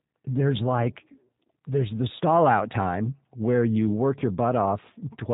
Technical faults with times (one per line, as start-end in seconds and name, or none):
0.00-5.33 G.729 codec